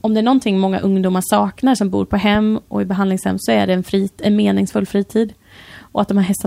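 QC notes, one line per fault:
2.35–2.37 s, loud pop: a single sharp pop, a few decibels above the speech, lands between "saknar som bor på" and "och i behandlingshem så" while the speech carries on beneath it; likely a brief voltage spike from a plug, switch or static discharge entering the signal chain.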